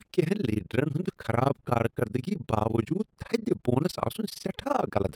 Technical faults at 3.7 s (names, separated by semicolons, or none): overlap-add ripple